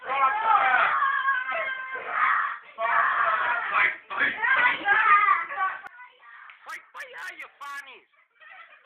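From 5.87 s to the end, the sound collapses in mono, dropping about 24 dB. It drops to a faint residue, likely one channel inverted.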